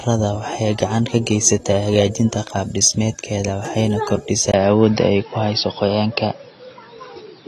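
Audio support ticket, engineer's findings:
AAC compression, whole clip. Dull, smeared speech with warbling, fizzy sibilants, plainly audible throughout. Likely cause: low-bitrate AAC-LC encoding, consistent with roughly 32 kbps. The encoder quantises each frame's frequency lines coarsely, dropping or noise-filling weak bands and capping the top end. Spectrogram: hard ceiling with nothing above 12.1 kHz, patchy holes and blotchy texture in upper bands, smeared consonant onsets. Waveform shows little. Look at the spectrogram.

Input switched to a poorer device, 4.52 s to end of clip. Short dropout of 20 ms at 4.52 s, then narrower, boxier sound. Likely cause: capture moved to a lower-grade microphone or headset call profile. Bandwidth now stops at 5.6 kHz. Level shifts by a few dB. A new noise floor sits roughly 35 dB under the speech. Spectrogram: upper band abruptly empties at the switch, with a thin vertical gap. 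Waveform: brief flatline, then step in amplitude.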